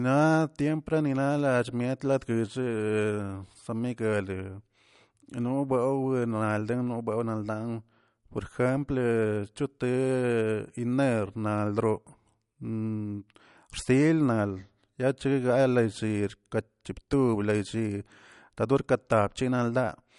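From start to finish the speech carries plainly audible MP3 compression damage. Nothing is left above about 11.2 kHz, so the treble stops at a hard ceiling and s sounds lose their top. Weak spectral detail flickers in and out between frames, giving the voice a watery, swirling texture with metallic chirps on sibilants. Consonant onsets smear. The likely cause is a low-bitrate encode, one that fits about 48 kbps, which starved the encoder of bits.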